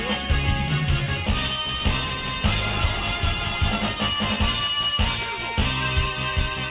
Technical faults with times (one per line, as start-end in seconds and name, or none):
none